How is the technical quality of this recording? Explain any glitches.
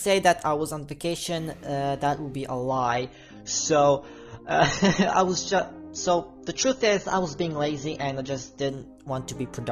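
Quality drops sharply for a six-second stretch. The adaptive stream switches to a lower bitrate from 2.69 to 8.69 s. When the connection slowed, the player fetched a cheaper encoding, which points to a fall from around 96 to 24 kbit/s. The sound turns dull and smeared, with nothing above 6.9 kHz, and returns abruptly without any gap.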